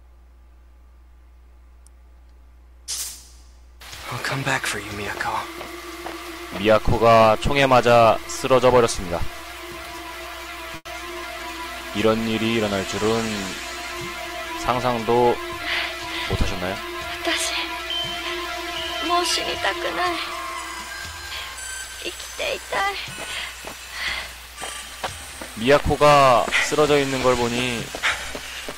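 At 10.75 s a burst of packet loss drops about 100 ms of audio. The receiver extends the last sound for roughly 100 ms, fading it out, then about 20 ms of silence follows before playback resumes at 10.87 s, with the lost stretch skipped.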